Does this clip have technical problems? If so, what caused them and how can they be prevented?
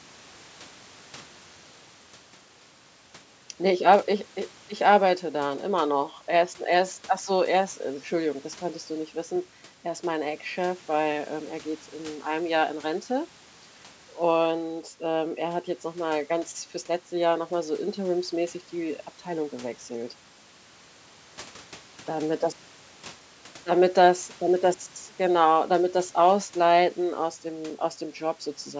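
No, the speech shows no technical faults; it has passed through a call's microphone processing, which trims the lowest bass and leaves nothing above 8 kHz, and that is normal for such a path.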